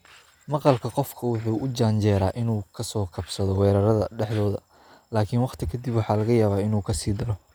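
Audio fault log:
No faults are audible anywhere in this speech recording.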